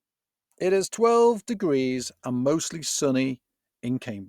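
Nothing goes wrong anywhere in this bit of speech; there's simply no technical fault to point to.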